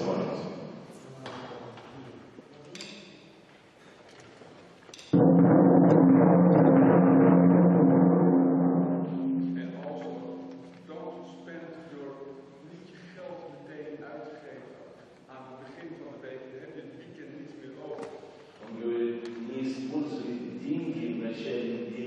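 Nothing technical stands out in this audio; there's no fault to point to at any moment.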